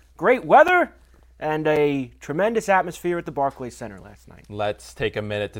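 At 0.68 s the sound drops to a block of digital silence lasting about 5.8 ms. It drops again at 1.76 s for the same length. Each gap is a run of silence with no fade at either edge, and the hole comes across as a tick or dip. The identical length fits a 256-sample buffer that was not filled in time. That points to an output underrun, unlike a dropout that fades or a click with no gap behind it.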